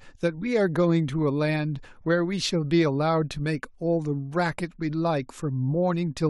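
No faults detected anywhere in the speech; nothing to flag.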